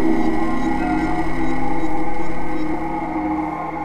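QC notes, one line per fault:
2.74 s, audio missing between chunks: about 50 ms of sound vanishes and the two sides butt together with no silent gap, so it reads as a skip rather than a dropout to silence, likely from a recorder losing material while switching between one-second chunks.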